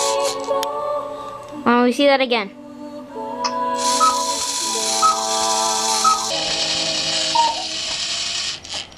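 From 6.30 s to the end, the sound turns slow and heavy, pitched down about 5.5 semitones at 0.73 times speed: a wrong sample rate, which fits 44.1 kHz material played at 32 kHz.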